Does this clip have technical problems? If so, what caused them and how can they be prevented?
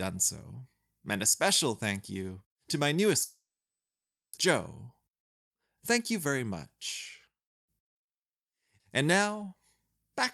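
Yes. From 3.23 to 4.39 s the speech breaks off, continues briefly as a fading buzz, then goes almost silent for about 0.9 s. This is a long network dropout, likely caused by lost packets, and about one second of audio never plays. Prevention: use redundancy or FEC and a more stable network path.

From 4.47 to 6.41 s there is a jitter buffer speed-up. The receiver trims short pitch-period segments to shrink excess delay, so speech runs at about 105% speed at unchanged pitch, removing roughly a tenth of a second. Prevention: reduce network jitter so the buffer rarely overfills.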